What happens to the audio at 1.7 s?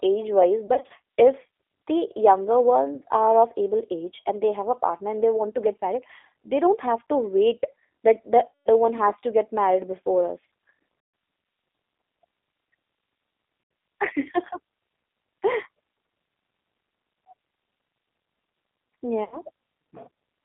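At 1.7 s the speech sounds thin, slightly rough and synthetic, with nothing above about 3.6 kHz and little below 300 Hz. This is G.729 codec damage, present throughout the clip. The codec rebuilds each 10 ms frame from a vocal tract filter, a pitch predictor and a few coded pulses rather than the actual waveform, which points to an 8 kbit/s G.729A link. The plainly audible roughness comes from that approximation.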